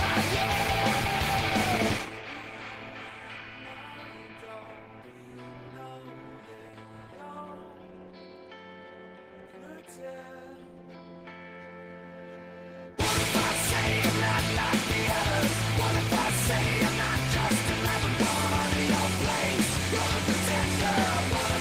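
Nothing in this recording trips, drops out or gets mangled along the way, so there's no technical fault here to point at.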